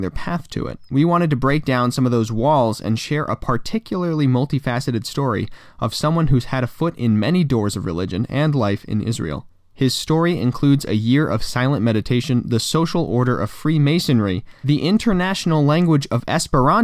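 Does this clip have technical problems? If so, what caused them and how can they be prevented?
No, this clip has no technical problems, so there is nothing to trace to a cause or prevent.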